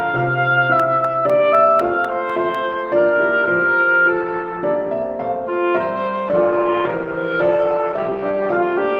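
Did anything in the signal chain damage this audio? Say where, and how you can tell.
Yes, at two points. The first is at the driver or buffer stage: periodic USB or driver dropouts from 0.80 to 2.55 s. Every 0.25 s a tiny piece of audio, roughly a millisecond, is lost and replaced by silence, about seven times in all. Each gap lands as a small, regularly spaced tick. That fixed rhythm points to a background task repeatedly stalling the bus or audio driver.

The second is a call bitrate drop at the codec stage, from 6.29 to 8.65 s. The call's bandwidth estimate fell, and the encoder was pushed from 32 kbps down to 14 kbps, staying at the lowest rate for about 2.3 s. With so few bits available, the coder quantises far more coarsely and sacrifices the top end. The sound turns rough and duller in that stretch until the bitrate recovers.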